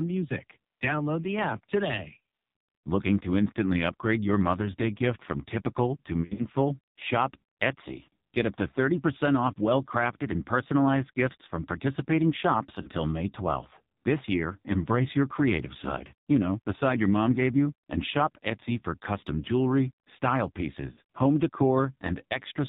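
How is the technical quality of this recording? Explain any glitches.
Poor: the whole clip passes through a heavily degraded narrowband mobile codec, with three brief dropouts.

AMR narrowband mobile codec: Nothing above 4 kHz survives, and the voice sounds buzzy and synthetic, which points to a very low mode near 5.9 kbps. Unlike plain low-pass filtering, the pulse-driven vocal-tract model adds that artificial rasp.

Lost AMR speech frames: After "gift from typical to", 6.22 to 6.46 s; after "gifts from participating shops", 12.82 to 12.90 s; after "for custom jewelry style", 20.92 to 20.99 s. Corrupted frames made the decoder repeat its last good settings at falling gain, so the speech smears and briefly warbles instead of cutting to hard silence as a packet gap would. In the first event, about 100 ms of losses are scattered over 160 ms.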